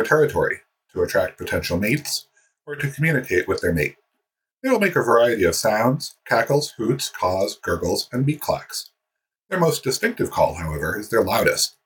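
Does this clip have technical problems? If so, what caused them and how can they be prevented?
No, there are no technical problems to hear in this clip. Since nothing went wrong, there is nothing here that needs preventing.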